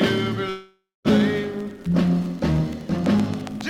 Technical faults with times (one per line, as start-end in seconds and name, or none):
0.49-1.08 call audio freeze
3.06-3.69 train of clicks